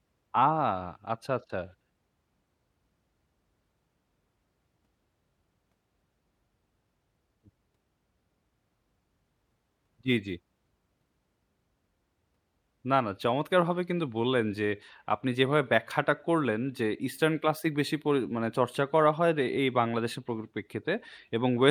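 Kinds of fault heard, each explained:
Sample clock jitter: an unsteady converter clock mistimes samples by a couple of microseconds, adding a hiss-like roughness about 40 dB below the speech.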